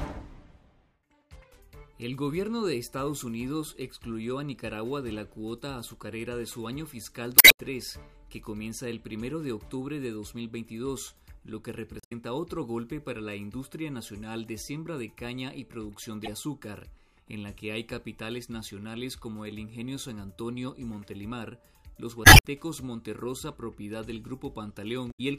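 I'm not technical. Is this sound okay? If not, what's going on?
No. You'll hear five short chirps or blips, at 7.36–7.59, 11.97–12.12, 16.24–16.28, 22.22–22.45 and 25.08–25.20 seconds. They come from damaged data in a compressed stream: bits of the file are corrupted, so the player briefly misreads them before finding its place again.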